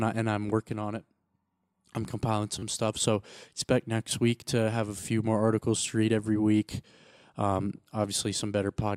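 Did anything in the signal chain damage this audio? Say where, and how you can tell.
Yes. The driver or buffer stage failed to deliver fresh audio in time, so the device replayed its last buffer, a repeated buffer fault. At 2.59 to 2.62 s, after "I'm compiling", one slice of about 10.7 ms sounds three extra times. At 5.00 to 5.02 s, after "week to have a", a slice plays twice more. Hard joins between the repeats give a brief buzzy stutter, and the slice length fits a 512-sample buffer.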